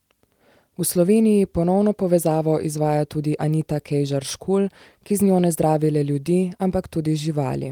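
No technical faults can be heard anywhere in the speech.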